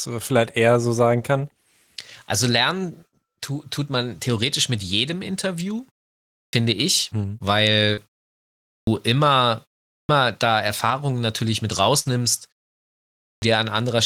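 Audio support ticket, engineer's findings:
Clipped start after a pause at 6.42, 8.78, 9.99 and 13.32 s. Onsets cut abrupt out of silence, first sounds gone. Roughly 110, 93, 100 and 100 ms swallowed. Preceding gaps 0.59, 0.78, 0.4 and 0.88 s. Component: output device. It sleeps during the silence and needs about a tenth of a second to wake and relock, so each phrase start is lost.

Short concealed packet loss at 7.93 to 7.99 s. Brief smear, wobble. About 40 ms of audio never arrived. Component: network path and receiver jitter buffer. The decoder extended the last sound for about 38 ms, then blended back into real audio.

Burst of packet loss at 11.99 to 12.07 s. Held buzz or fading hiss, then a jump forward. About 60 ms missing. Component: network, several consecutive packets late or dropped. Concealment continued the last sound for about 57 ms and faded it. Audio resumes past the gap; the content in between is gone.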